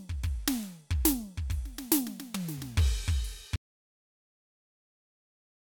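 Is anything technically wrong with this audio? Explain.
Yes. At 3.56 s the music stops dead in an audio dropout to silence. Silence runs to the end, likely from a lost input.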